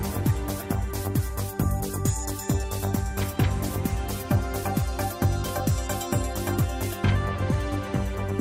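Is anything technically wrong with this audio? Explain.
Yes. There are timing faults caused by clock drift between sender and receiver, and the receiver keeps correcting for it.

Clock drift between sender and receiver runs through the whole clip. The sending device's audio clock runs a few percent fast compared with the receiving end. Audio arrives slightly quicker than the receiver plays it out, so its jitter buffer keeps filling. The receiver has to discard material to keep latency in check. The drift itself is not a discrete event. It is the steady mismatch behind the small, uneven hiccups heard across the clip.

Repeated timing corrections run from 0.31 s to 8.31 s. Because the sender's clock is fast, the receiver keeps trimming short pieces out of the stream. Every edit goes the same way, so the net effect is playback at about 102% speed across that stretch. The cuts are small and unevenly spaced. 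They come across as faint skips and a slightly restless, hurried tempo rather than as obvious gaps or dropouts.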